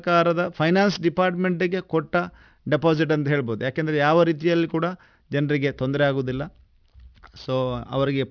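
Throughout the speech, the sample rate appears to have been cut to around 11 kHz with no anti-aliasing filter applied first, so this is aliasing. Energy that sat above the 5.5 kHz folding point was mirrored back down into the remaining band as false, unrelated frequencies, at a level roughly 25 dB under the wanted signal. Sibilants turn gritty and metallic, and the spectrum stays dense right up to the 5.5 kHz edge.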